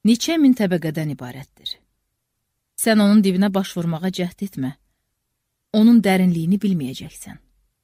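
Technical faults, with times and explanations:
No technical faults can be heard.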